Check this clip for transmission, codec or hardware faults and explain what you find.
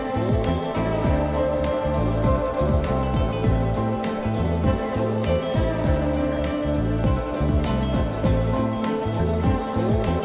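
No faults found; the audio has the narrowband sound of a call path with nothing above 4 kHz, consistent with G.711 mu-law at 64 kbps.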